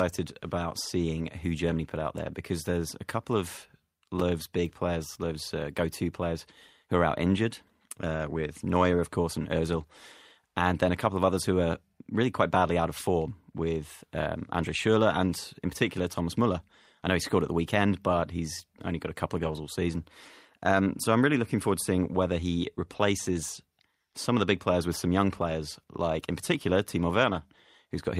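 At 19.39 to 19.57 s, between "got a couple of" and "all season", there is a lost packet rebuilt from error correction. The decoder filled about 100 ms from lower-bitrate backup copies of the missing packets, so no gap is heard, but that stretch sounds rougher and noisier.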